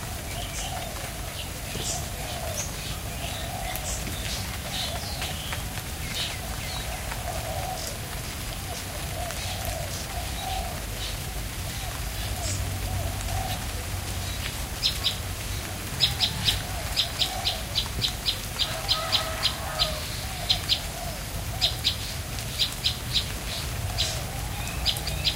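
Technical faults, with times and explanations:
5.30 s, 13.53 s, 20.49 s and 25.08 s: damaged data in a compressed stream. At each point, part of the encoded stream was corrupted. The decoder misreads the damaged frame, loses its place and has to search for the next valid frame header before normal decoding resumes. Each event is over within about 12 to 18 ms, so it sounds like a short, sharp chirp or blip cutting into the sound, not a lasting dropout.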